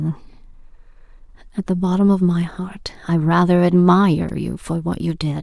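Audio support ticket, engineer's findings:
Repeated buffer at 2.55 s and 4.29 s in the speech. Output device replayed its last block when new audio arrived late. A block of about 2.67 ms, fitting a 64-sample buffer, is heard twice extra, then four times extra. Each repeat gives a brief click-like buzz. No audio lost.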